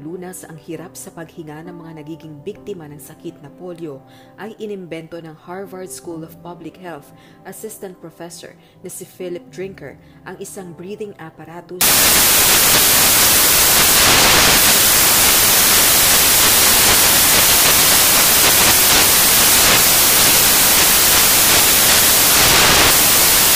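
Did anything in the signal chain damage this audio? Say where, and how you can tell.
Yes. From 11.81 s to the end, the sample-format conversion stage assembles samples from the wrong bytes: each value is misaligned or byte-swapped, so the fast-changing low bits land in the high positions. The result is loud, harsh broadband noise, close to white on loud passages.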